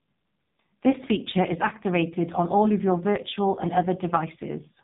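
An AMR narrowband mobile codec at a very low bitrate, near 5 kbps by ear, strips everything above 3.8 kHz throughout, leaving the speech buzzy and synthetic.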